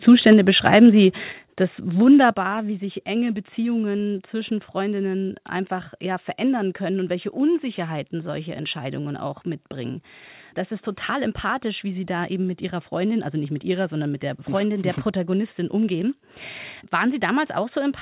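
From 0.08 to 0.33 s, the loudest speech peaks turn harsh and crackly. They are pushed about 3 dB past the converter's limit. This is likely microphone overload, with the converter flattening the waveform tops. Right at 0.33 s, voice and background drop together by about 2 dB. That is the microphone volume stepped down, likely by the call software reacting to the clipping.

From 0.66 to 0.78 s, a second, milder overload follows, about 2 dB over. At 1.32 s, the level steps down again by about 5 dB. At 2.34 s, a further drop of about 6 dB comes just before "wie sich enge". Each drop is sudden, with no fade.

Nothing above 4 kHz comes through, which fits a narrowband G.711 call path.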